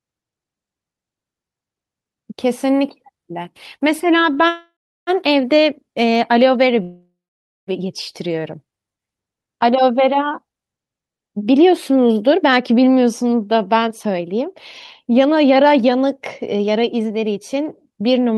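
At 4.33 s the speech catches for an instant. This is a short stall from a late packet. One packet missed its slot, and the jitter buffer ran dry. The receiver stretched the last sound for about 29 ms until the packet came. Playback then resumed at the same point. Nothing is lost. The sound is simply held a touch too long, with a faint buzz or dip.

At 4.48 s a longer hang begins and lasts until 5.10 s. This is a call audio freeze. The last sound carries on as a fading buzz or hiss, then drops to silence for about 340 ms. Around 586 ms is filled in before the speech picks up where it stopped. A second freeze runs from 6.82 s to 7.70 s. Here about 849 ms is filled, with about 520 ms of it silent. The likely cause is packets delayed in transit while the jitter buffer sat empty.

From 13.88 s to 14.48 s the speech is rushed. This is a jitter buffer speed-up, at 107 percent. The buffer held more audio than its target. 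The receiver trimmed tiny pitch-period pieces again and again, removing about 50 ms. The pitch stays the same. A stronger speed-up at 108 percent runs from 15.07 s to 18.34 s. It removes about a third of a second, and the speech sounds hurried.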